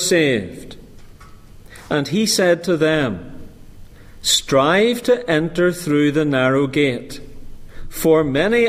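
No technical faults are audible.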